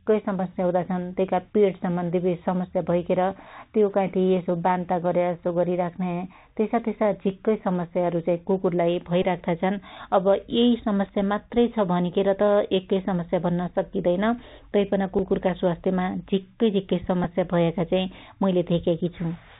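Throughout the speech, the sound is boxed-in and dull, with nothing above 4 kHz, scratchy s sounds and a grainy hiss underneath. This is the Bluetooth CVSD headset codec, which sends one up-or-down bit per sample at 64 kHz with an adapting step that can't keep up with sharp, loud detail.

At 9.23 s comes a brief buzzy flutter lasting about 15 ms, and at 11.06 s a tiny tick. Both are the Bluetooth headset packet repeated fault: lost voice packets were filled by decoding the previous packet again. The first fits about four consecutive repeats at a 3.75 ms rhythm, the second a single one. Similar ticks follow at 15.19 s, between "सक्कीदैन तैपन" and "स्वास्थ्यमा झिक्कै झिक्कै", and at 17.24 s, just after "स्वास्थ्यमा झिक्कै झिक्कै". The last one sounds like a pair of repeats.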